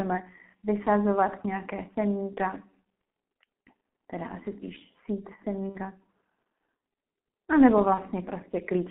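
From the start, the speech carries G.723.1 codec damage. The band runs only from 150 Hz to 3.4 kHz. The coarse, slowly updated voice model points to a rate near 6.3 kbit/s. The damage is heavy. The voice sounds muffled and hoarse. Consonants smear together.

At 3.89 to 3.92 s, just before "teda asi spíš sít", comes VoIP packet loss concealed by the speech codec. About 30 ms is missing. The decoder fills it by repeating its last pitch and filter at falling gain. It sounds like a brief smear of stretched tone or noise. At 5.69 to 5.79 s, after "teda asi spíš sít", a longer gap follows. The lost stretch is 60 ms, which fits two dropped frames. The fill fades further, and the voice stays weak as the decoder rebuilds. At 7.94 to 8.02 s, after "a nebo", another 30 ms gap gives the same short fill.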